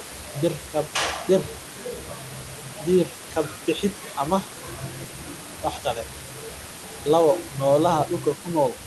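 No technical faults can be heard in the recording.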